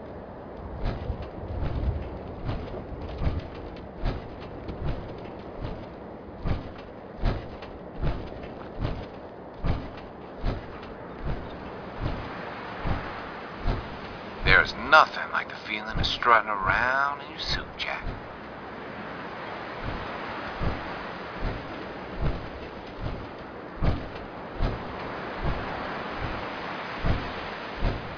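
Nothing in the audio stood out as a problem on listening.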